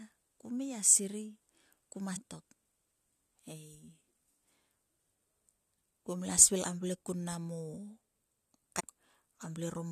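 At 2.15 s, 6.63 s and again from 8.79 to 8.81 s, short glitches break into the speech, each lasting only about 20 ms. They are the sound of damaged data in a compressed stream: corrupted bytes make the decoder misread a frame and briefly lose sync until it locks onto the next valid header.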